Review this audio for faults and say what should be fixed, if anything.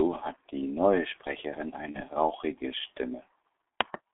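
The whole clip carries G.723.1 codec damage: speech is held to roughly 250 Hz to 3.6 kHz at about 6.3 kbit/s, and the slow-updating voice model makes it muffled and hoarse with smeared consonants. A clean narrowband line would sound thin but not rough. Prevent it by negotiating a wideband codec such as G.722 or Opus instead of G.723.1.

From 1.91 s to 2.01 s there is VoIP packet loss concealed by the speech codec. The decoder extrapolated from its last pitch and filter while lowering the gain, which fits a single lost 30 ms frame. Unlike a plain dropout, the gap is filled rather than silent, and the voice stays weakened briefly after the loss. Prevent it with a larger jitter buffer, forward error correction, or a less congested network path.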